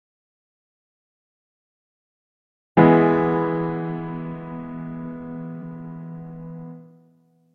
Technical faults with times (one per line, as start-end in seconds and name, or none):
5.58-5.62 damaged data in a compressed stream